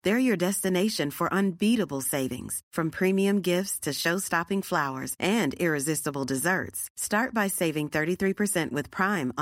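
No audible technical faults.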